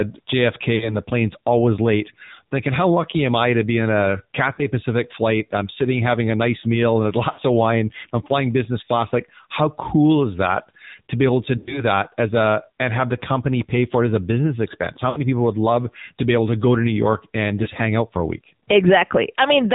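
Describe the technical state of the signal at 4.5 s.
At 4.54 to 4.66 s there are lost AMR speech frames. The decoder bridges the gap by repeating the last good pitch and vocal-tract settings at falling gain, so the sound smears, warbles and sags. The missing stretch is about 40 ms, which fits two 20 ms frames. Unlike a network dropout, there is no hard cut to digital silence or click. The fade is smooth and stays pitched, and the speech returns weak or rough for a moment.

Underneath, and across the whole clip, is the AMR narrowband mobile codec at 7.4 kbps, with plainly audible damage. Nothing above 4 kHz survives, and the low bitrate leaves the voice buzzy and synthetic, since each frame is rebuilt from a vocal-tract model driven by sparse pulses. That buzzy, modelled quality is what separates it from a plain low-pass filter, which would only dull the sound.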